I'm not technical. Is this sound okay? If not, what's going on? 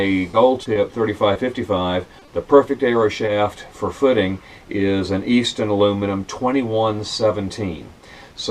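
No. Short concealed packet loss occurs at 0.31, 0.63, 0.73, 1.33, 2.19, 2.25 and 3.25 s. Each time, about 20 ms of audio arrived too late, and the receiver patched the gap by continuing the previous sound, causing a brief smear or wobble.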